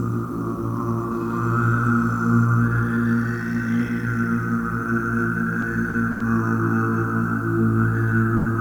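At 5.89 to 5.94 s, 6.11 to 6.32 s and 8.36 to 8.46 s, short stalls from a late packet hold the sound for 40, 90 and 90 ms with a slight buzz or dip. Unlike a lost packet, nothing is skipped: playback resumes exactly where it stopped.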